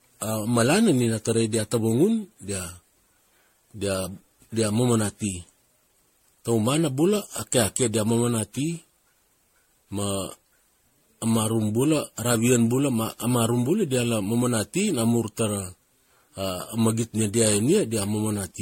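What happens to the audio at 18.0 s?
At 18.0 s, as throughout the clip, the speech shows generation loss, likely from around seven successive MP3 passes at about 64 kbit/s, each re-quantising on a shifted frame grid. Noise and spectral holes pile up, leaving a swirly, hollow, smeared sound with blurred attacks and nothing above 16.5 kHz.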